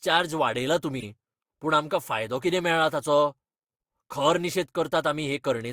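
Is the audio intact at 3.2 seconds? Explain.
Yes, the audio at 3.2 seconds is intact, with no dropout, click, distortion or other fault at that moment.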